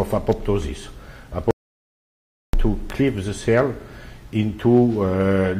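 At 1.51 s the sound stops dead and stays silent until 2.53 s, roughly a second lost. This is an audio dropout to silence. The input was likely cut by a disconnected device, a failed link or a stray mute while the recorder kept writing silence. Unlike a level dip or a gate closing, the gap holds no room tone or noise floor at all, and whatever sounded during that second is simply gone rather than muffled.

Shortly after the sound returns, between 2.90 and 2.92 s, a single loud pop lands on top of it, peaking about 10 dB above the surrounding signal. A sudden voltage step or pulse, most plausibly from a plug, switch, static discharge or driver glitch, was added to the waveform. The audio carries on underneath without a break, which separates this pop from a dropout or from a click caused by a splice or a skipped block.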